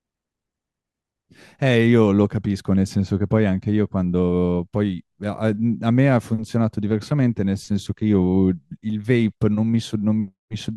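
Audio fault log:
No faults heard anywhere in this speech recording.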